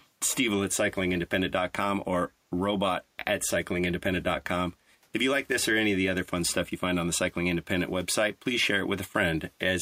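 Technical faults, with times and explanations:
0.00–0.06 s, echo leak: right at the start there's a very faint delayed copy of the speech, about 181 ms behind and roughly 35 dB down. That's likely the far end's echo canceller letting a scrap of its loudspeaker pickup slip back through.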